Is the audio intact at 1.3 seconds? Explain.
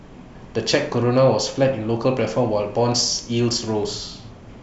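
Yes, the speech at 1.3 seconds plays through cleanly, with no dropout, click, distortion or other fault at that point.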